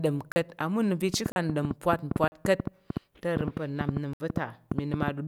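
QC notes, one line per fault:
0.32–0.36 s, 1.32–1.36 s, 2.28–2.32 s and 4.13–4.20 s, blocks of digital silence: the speech drops to silence and returns with no fade, so the middle is a short hole. The first three gaps last 40 ms each. The first comes just before "ama unəm va̱" and the second just after it. The last gap is longer, about 67 ms. This points to an output buffer that went unfilled in time.
1.14–5.09 s, train of clicks: roughly thirty similar pulses at an uneven pace, averaging about 7.1 per second, tick over the speech and through its pauses, beginning just after "ama unəm va̱". They peak well above the speech level, about 15 dB over it. The repetition of near-identical pulses suggests an outside source injecting them, likely interference from nearby equipment or a faulty connection or power supply.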